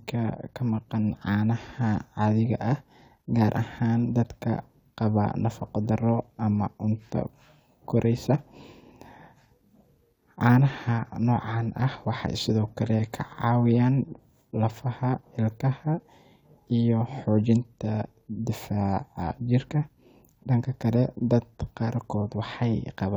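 Nothing stood out as a technical fault on listening to this speech recording.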